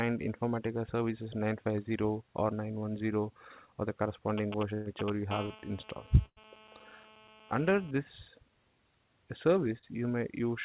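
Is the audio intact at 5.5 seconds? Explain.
No, there are two things going on right at that spot. First, a GSM phone buzz runs from 5.31 to 7.91 s. A 2G handset nearby is transmitting in bursts about 217 times a second, and the audio circuitry rectifies those radio pulses into a hard, raspy 217 Hz buzz stacked with harmonics. It sits about 16 dB below the signal and stays nearly steady, which is what you get when the phone is on a call.

Second, inside that buzz, there's a short concealed packet loss between 5.46 and 5.52 s. About 40 ms of audio never reached the decoder in time, so the receiver patched the gap by extending the last bit of sound, using its pitch if voiced or shaped noise if not, then cross-faded back into the real audio. You hear it as a quick smear or wobble right at 5.5 s.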